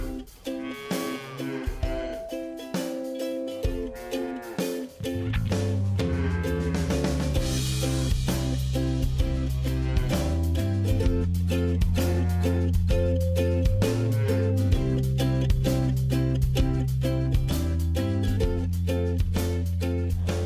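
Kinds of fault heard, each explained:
Nothing stood out as a fault anywhere in the recording on careful listening.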